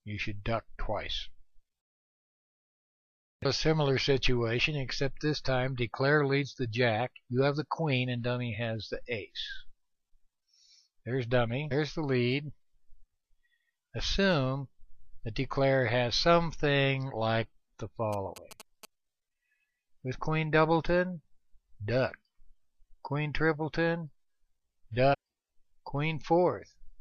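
Damaged data in the compressed stream causes brief glitches at 5.46 s, 11.71 to 11.73 s, 17.09 to 17.12 s and 25.13 to 25.15 s. Each time the decoder loses frame sync. GSM signalling bursts from a nearby phone sound from 18.13 to 18.85 s. The audio circuit rectifies them into a galloping pattern of short 217 Hz buzzes, roughly 15 dB below the signal.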